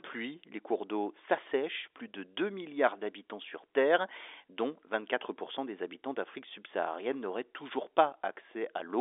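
No technical faults can be heard anywhere in the speech. It carries the narrow band of G.711 telephone coding, running from about 300 Hz to 3.6 kHz with nothing above about 3.7 kHz, which gives it the familiar sound of a fixed-line call.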